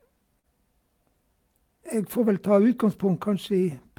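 At about 0.39 to 0.46 s there's a short concealed packet loss: roughly 40 ms of the call arrived too late, so the receiver patched the gap by extending the preceding sound and then blending back in. You hear it as a quick smear or wobble in the speech.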